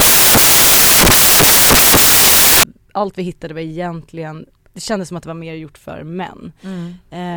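From 0.00 to 2.63 s, samples built from the wrong bytes turn the speech into loud, harsh broadband noise until "allt vi hittade var".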